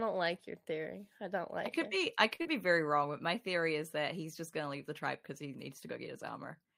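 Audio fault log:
2.35–2.42 s, short stall from a late packet: right after "could it be I", a packet arrives late and the jitter buffer runs dry. The receiver holds the last sound for about 42 ms until the packet turns up, then resumes from the same point, so no audio is lost. The held sound carries a slight buzz or dip, and everything after it plays about 42 ms later than before.
2.42–2.47 s, short concealed packet loss: immediately after the stall, just before "be very", 40 ms of audio never reaches the decoder in time. The receiver covers the gap with about 33 ms of synthetic continuation, extending the preceding sound's pitch or shaped noise, then crossfades back into the real signal. The result is a brief smear or wobble.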